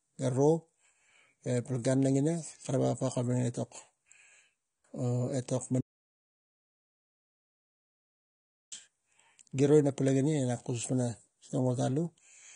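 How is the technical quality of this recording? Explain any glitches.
The recording has two clear problems: constant codec damage, and one long gap of total silence partway through.

Throughout, the speech sounds dull and smeared, with a warbling, fizzy texture. This is likely AAC compression at a low bitrate, around 32 kbps. A spectrogram shows nothing above 9.7 kHz.

From 5.81 to 8.72 s, there is an audio dropout to silence: about 2.9 s of speech vanishes, likely because the input was lost while recording continued. The waveform goes flat, with no room tone.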